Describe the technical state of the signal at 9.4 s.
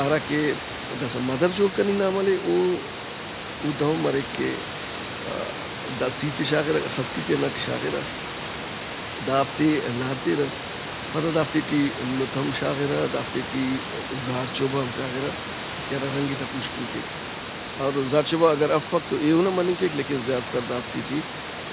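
At 9.4 s the speech is intact, carried through the call codec with its band limit at 4 kHz and sitting about 10 dB above the room noise, with nothing breaking up the signal at that point.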